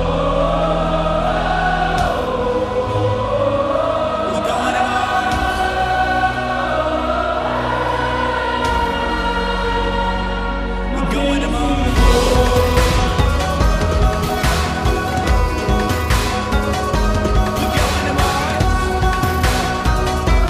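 No technical faults can be heard anywhere in this audio.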